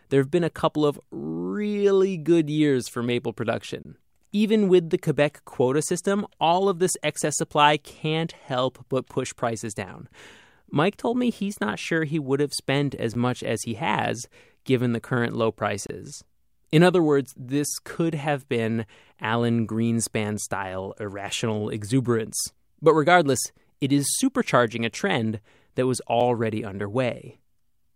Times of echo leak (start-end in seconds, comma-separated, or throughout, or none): none